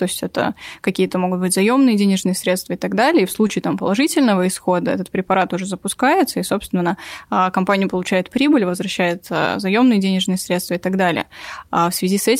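Three brief smears interrupt the speech, at 1.07 to 1.10 s, 3.47 to 3.50 s, and a shorter one at 4.59 s. Each is short concealed packet loss: a stretch of the call arrived too late for the decoder, so the receiver extended the preceding sound for about 15, 17 and 7 ms before crossfading back into real audio, covering gaps of roughly 10, 20 and 10 ms.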